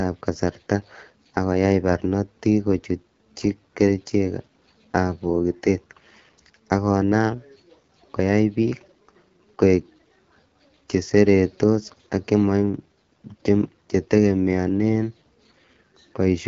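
All the way through, the speech carries the rough, raspy texture of the AMR wideband (HD Voice) codec, which fits one of its lowest modes, around 8.85 kbit/s. Nothing reaches past 7.4 kHz, and the top band sounds like shaped noise rather than real detail.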